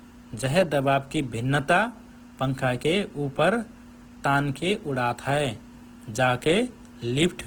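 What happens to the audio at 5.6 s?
At 5.6 s the speech carries the same grainy, rough texture heard throughout the clip, likely Opus compression in its music mode at a rate that fits about 16 kbps. Starved bands get filled with noise or folded copies, so it sounds gritty rather than MP3's swirling, and the full bandwidth is kept.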